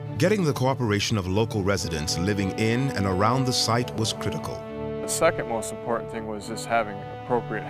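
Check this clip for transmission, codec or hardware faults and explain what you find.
One hardware fault is present. From 3.51 to 4.41 s, GSM phone buzz: a nearby 2G phone in a call transmits bursts that the audio circuitry rectifies, leaving a raspy, harmonic-rich 217 Hz buzz, steady, about 31 dB below the signal, unrelated to the sound.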